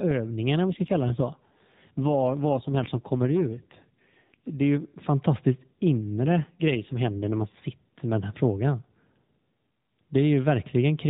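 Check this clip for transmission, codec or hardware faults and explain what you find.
Two AMR rate drops occur in this narrowband mobile speech, which is carried by AMR-NB at 12.2 kbps with light codec damage.

AMR rate drop, 0.67 to 4.36 s and 6.07 to 7.61 s (between "är ju fantastiskt" and "med den här frågan"): the link pushes the codec from 12.2 down to 5.9 kbps to spend bits on error protection. The band stays the same and there is no gap, but the voice turns rougher and more synthetic until the rate recovers.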